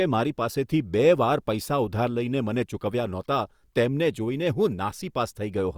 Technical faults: none

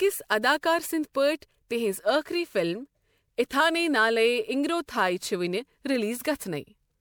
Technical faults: generation loss

